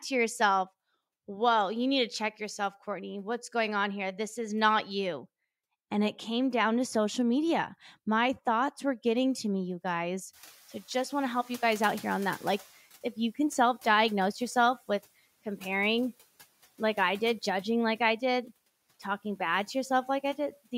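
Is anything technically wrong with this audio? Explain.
Yes. From 10.33 to 12.8 s, between "to me you guys" and "if you can self", the noise suppressor is catching up. Around 10.5 s the room noise jumps by about 22 dB. The suppressor's noise estimate is still set for the quieter room, so the new noise leaks through with little reduction. Over about 2.5 s the estimate adapts and the noise sinks by about 9 dB, from about 26 dB below the speech. A gate or pumping would rise and fall with the speech. This is a single slow fade that follows the noise jump.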